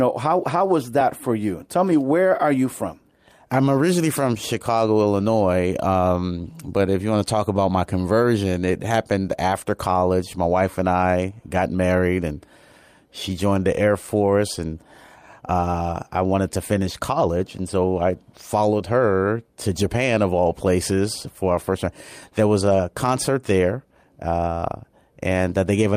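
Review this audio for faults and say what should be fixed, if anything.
Nothing stood out on listening, so there is nothing here that needs fixing.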